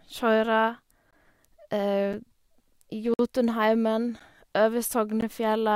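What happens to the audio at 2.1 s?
At 2.13 s there is a gap between stream segments. Two one-second segments don't meet exactly, and the player fills the hole with silence. About 6.5 ms of dead air cuts into the speech with hard edges. Nothing is lost.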